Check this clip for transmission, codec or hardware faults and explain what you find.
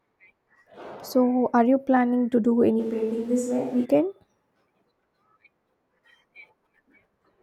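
One fault is audible in this speech. From 2.81 to 3.84 s it abruptly turns hollow, roomy, thin and about 5 dB quieter, likely from a switch to a distant microphone.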